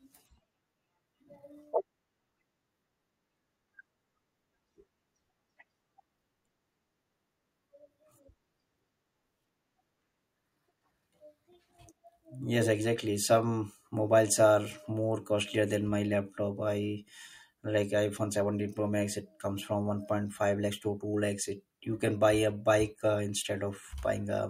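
No technical faults can be heard anywhere in the recording.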